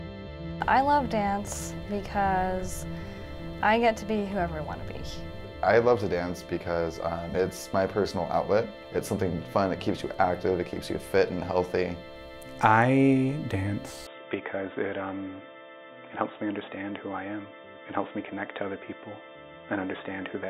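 From 14.07 s the sound turns dull and boxy, likely an input switched to a poorer device; the spectrogram shows nothing above 3.8 kHz, with unchanged level.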